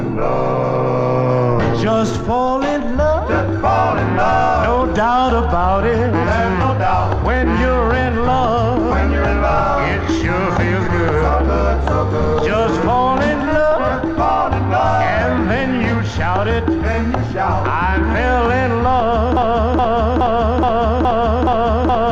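From 19.37 s to the end of the clip, the same short fragment of sound, about 0.42 s long, plays over and over back to back, repeating seven times with no variation before the audio stops. This is a broken-record loop, most likely because the player, encoder or stream stalled and kept resending the last fragment it held. Whatever should have played in those final seconds never arrives.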